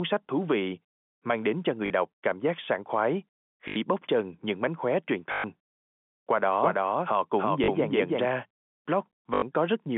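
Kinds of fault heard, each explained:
Packet loss with last packet repeated: packets went missing and the receiver replayed the last one until new data arrived, so the speech stutters robotically, five times between 1.86 and 9.42 s; gaps of 40 to 120 ms fit 20 ms packets.
Doubled audio track: a second copy of the signal was likely mixed in through a slower path, so from 6.62 to 8.26 s the speech repeats at about the same level roughly a third of a second late, dry, starting and stopping abruptly.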